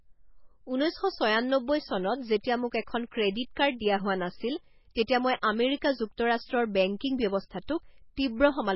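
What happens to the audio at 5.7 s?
At 5.7 s the speech is watery and swirly with smeared attacks, likely MP3 compression throughout the clip, fitting a starved bitrate near 16 kbps. A spectrogram shows nothing above 5.6 kHz and flickering holes.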